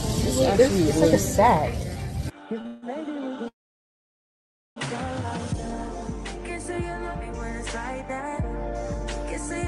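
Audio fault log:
Audio fault log:
2.61 to 2.67 s, short stall from a late packet: a packet missed its playout slot and the jitter buffer ran dry, so the receiver stretched the last sound for about 35 ms while waiting. Playback then resumed from the same point, so nothing is lost. The result is a sound held slightly too long, with a slight buzz or dip where the receiver extended what it already had.
2.67 to 2.84 s and 3.48 to 4.78 s, call audio freeze: playback halts, most likely because packets were held up in transit and the jitter buffer emptied. The first freeze follows straight on from the stall and adds about 153 ms of drawn-out filler. The second lasts 1.28 s. Its filler dies away and leaves about 1.25 s of silence. In both cases the sound picks up exactly where it stopped, so a gap is inserted but nothing is missing.
5.57 to 5.92 s, jitter buffer slow-down: with its reserve running low or its target delay just raised, the receiver repeated short stretches of the signal to rebuild the buffer. 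This added about 35 ms over this span and ran playback at 91% speed with no change in pitch. Sounds in this stretch come out slightly drawn out and sluggish.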